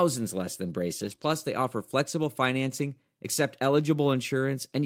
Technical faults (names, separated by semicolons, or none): lost packet rebuilt from error correction; short concealed packet loss